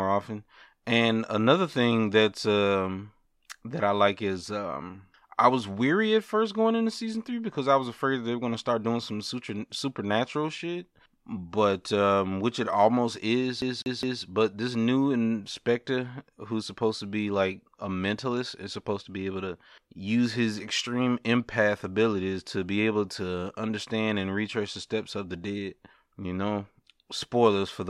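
Speech, with a CD stuck on one turn from 13.62 to 14.23 s. A scratch sends the laser back one track each revolution, so the same 205 ms slice of audio repeats three times, each jump marked by a brief mute, giving a rapid, even stutter.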